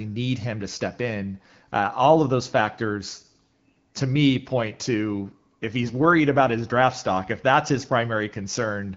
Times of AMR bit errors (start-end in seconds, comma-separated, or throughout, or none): 5.82-5.92